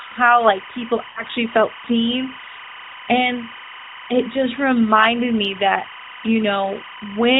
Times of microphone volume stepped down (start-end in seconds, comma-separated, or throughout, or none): none